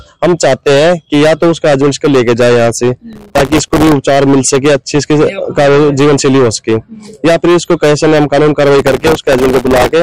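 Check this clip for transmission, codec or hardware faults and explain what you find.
Two faults are present: hard clipping across the whole clip, and two bursts of processor overload crackle.

Hard clipping runs from start to finish. A stage upstream was driven about 12 dB past its ceiling, so the waveform's peaks were cut flat, and roughly a fifth of all samples are pinned at that limit. With overload this heavy, the flattened tops add dense high harmonics, and every loud moment carries a harsh fuzz.

Processor overload crackle appears from 3.13 to 3.92 s and again from 8.79 to 9.92 s. The processor fell behind on very short audio buffers, on the order of a millisecond or two each, and missed their deadlines many times in a row. Each missed buffer was filled with a stale piece of earlier audio with hard edges. The result is a gritty tearing crackle on top of the already distorted sound, lasting about 0.8 s in the first burst and about 1.1 s in the second.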